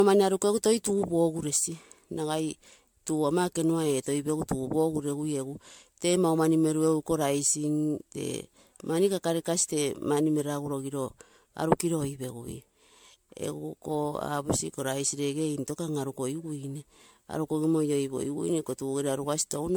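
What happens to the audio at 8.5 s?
Throughout the clip, including 8.5 s, repeated MP3 re-encoding, likely about seven passes, causes generation loss: the speech sounds swirly, hollow and smeared, with blurred attacks.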